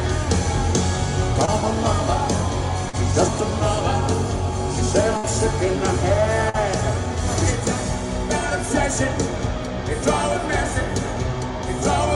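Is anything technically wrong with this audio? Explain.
Yes, there are dropouts from lost audio packets.

Short concealed packet loss occurs at 1.45 to 1.49 s, 2.89 to 2.95 s and 6.49 to 6.56 s. Each time, 20 to 40 ms of audio never arrived. The receiver extended the preceding sound to bridge the hole, which leaves a brief smear or wobble.

A burst of packet loss occurs at 5.17 to 5.25 s. About 60 ms of consecutive data went missing. The decoder continued the last sound while fading it down, so a held buzz or dying hiss replaces the gap before the audio resumes further along.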